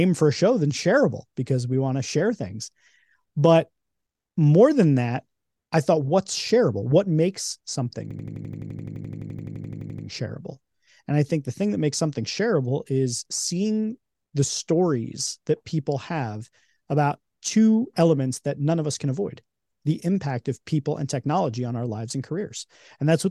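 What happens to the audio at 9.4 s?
At 9.4 s the speech is caught in a system hang loop from 8.11 to 10.07 s. A frozen driver replays one 85 ms chunk, which fits a 4096-sample buffer, as an 11.7 Hz machine-gun stutter. The spectrogram shows identical repeating blocks.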